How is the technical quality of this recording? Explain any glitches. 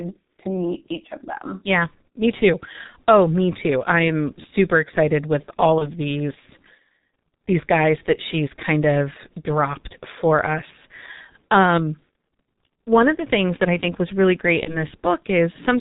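The recording quality is poor. The speech runs through a very low-rate telephony codec for its whole length, and it breaks up twice.

G.723.1 codec damage is heavy and constant. The coding fits a bitrate around 6 kbit/s. Nothing above 4 kHz survives. The codec's slow-updating voice model smears detail. The speech sounds muffled and hoarse. Consonants blur together.

VoIP packet loss concealed by the speech codec appears at 5.78 to 5.90 s and again at 14.63 to 14.85 s. Each gap fits one lost 30 ms frame. The decoder filled it by repeating its last pitch and filter at falling gain. You hear a brief, fading smear, buzzy or noisy. The speech stays weak or distorted for a while after the gap.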